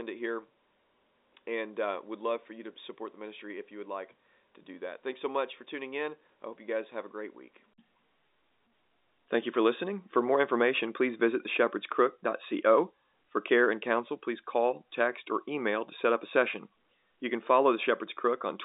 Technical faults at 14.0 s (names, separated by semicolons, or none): none